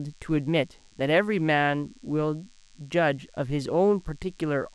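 A speech recording carries DECT cordless phone buzz for its whole length: a thin, steady 100 Hz buzz rich in harmonics, sitting roughly 35 dB below the speech. A nearby DECT handset or base transmits a burst every 10 ms, and the audio circuitry rectifies it.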